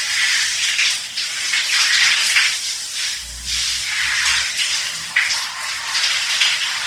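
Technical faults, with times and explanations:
throughout: Opus compression is the likely cause of the rough, grainy texture. Tones sound noisy rather than swirly. Short of bits, the encoder fills bands with folded or noise content, which fits its music mode near 24 kbps. Bandwidth stays full, reaching 20.2 kHz.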